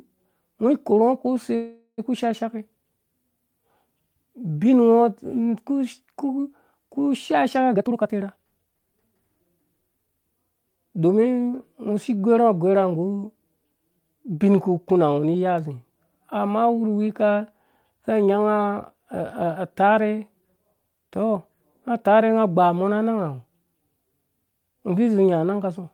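At 1.55 s the speech stalls in a call audio freeze that lasts until 2.00 s. The last sound gets stretched into a buzzy tail that fades out, with about 40 ms of silence just before the talker picks up exactly where they left off. Nothing seems to be lost. The stall most likely comes from packets getting held up in transit and the jitter buffer running dry. The receiver filled roughly 425 ms, so everything after this point runs that much later.

From 7.73 to 9.16 s you hear a jitter buffer speed-up. The speech rushes along at about 130% of normal speed with the pitch unchanged, so it sounds hurried but not chipmunky. The receiver is trimming short pitch-period-sized slices over and over to drain the excess delay. Across that stretch it cuts out somewhere around 0.4 s of audio, which is about the lag the earlier freeze built up.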